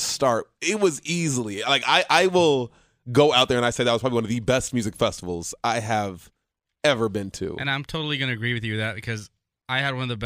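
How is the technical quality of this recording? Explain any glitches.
The technical quality of this recording is sound, with no glitches to explain.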